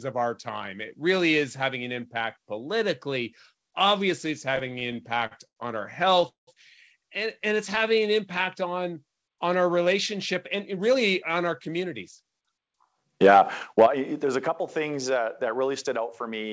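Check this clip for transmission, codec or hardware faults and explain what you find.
Several transmission and hardware faults are audible, carried over a call path whose absence of content above 8 kHz fits G.722 at 64 kbps.

Repeated stalls (stutter), 4.56 to 5.58 s and 6.10 to 6.49 s: packets arrived late, so the jitter buffer kept running dry and the receiver stretched the last sound to fill each wait. The first stretch holds thirteen short stalls, the longest 92 ms, covering about a quarter of it. The second holds four, the longest 187 ms, covering about half, so the sound drags and stutters there.

Jitter buffer slow-down, 7.50 to 8.01 s: with its reserve running low, the receiver repeated single pitch periods to add 50 ms of audio. Playback runs at 91% speed with the pitch unchanged, so sounds are drawn out.

Jitter buffer speed-up, 10.14 to 12.55 s: the buffer held more audio than its target, so the receiver trimmed short pitch-period pieces, removing about 150 ms. 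The sound runs at 106% speed at the same pitch and comes across slightly hurried.

Microphone overload, 13.23 to 13.41 s and 13.78 to 13.86 s: the peaks go about 3 dB past the converter's limit and their tops are cut off, likely because the microphone input volume was set too high. A few percent of samples are flattened, which gives the loudest moments a harsh, crackling edge.

Microphone volume stepped down, 13.86 s: right after the second clipped peak, the level drops suddenly by about 8 dB. This is likely the call software lowering the device's input gain in a single step after detecting the clipping.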